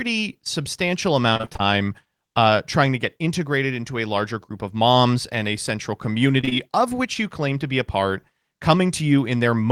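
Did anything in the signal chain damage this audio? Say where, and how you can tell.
Yes. From 1.33 to 1.61 s the speech turns choppy and robotic: repeated packet loss on the network, with seven short gaps patched by repeating the last sound.

From 6.41 to 6.53 s, after "moms and a central", there is a brief smear: short concealed packet loss, with three consecutive 20 ms holes filled by extrapolation.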